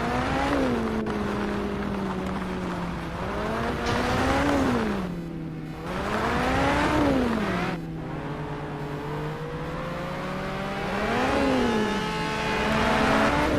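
From 3.45 s to the end, computer activity noise rides under the sound: a thin buzzing chirp pulsing at around 500 times per second, sitting roughly 30 dB below the signal. It comes from the computer's changing load disturbing the ground the audio circuit shares, so it follows the machine's activity, not the sound. On a spectrogram it shows as a comb of evenly spaced lines near 500 Hz and its harmonics; the waveform carries a fine, regular ripple.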